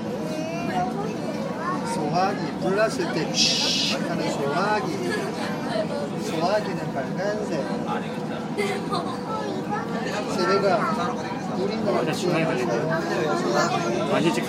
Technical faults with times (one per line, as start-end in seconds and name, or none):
6.65 corrupt frame decoded